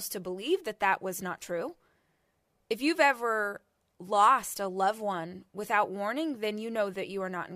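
No technical faults are audible.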